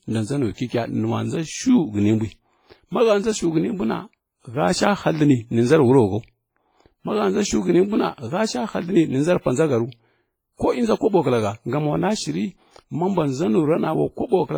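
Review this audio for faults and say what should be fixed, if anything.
Throughout the speech there is a ringing, washy quality, with a hiss that swells and fades along with the voice and a thinned, hollow character where quieter detail has dropped out. This is heavy WMA compression damage, likely from encoding at a low bitrate, which fits something around 24 kbps. At that rate a transform codec zeroes weak spectral lines and smears its quantisation noise across long blocks, even though content still reaches up to about 21.4 kHz. To prevent it, encode at a higher bitrate or use a more modern codec.

Pre-echo appears as a short hiss just ahead of sharp onsets, which also sound softened and smeared. It runs from 0.53 to 0.58 s (spread of 48 ms), from 0.67 to 0.70 s (30 ms) and from 9.41 to 9.46 s (47 ms). In each case an attack landed late in a transform block, so noise sized for the loud onset also filled the quiet moment before it. 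To prevent it, use an encoder with block switching to short windows on transients, or a higher bitrate.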